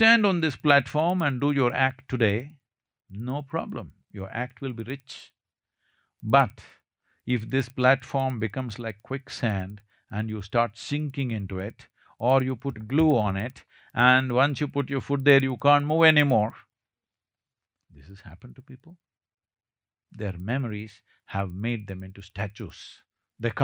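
From start to finish, a faint tick repeats ten times a second beneath the speech, stopping in pauses. It is a resampler restarted on every block. Each 100 ms block was upsampled alone, likely from 24 kHz to 48 kHz, so every block edge carries a small error.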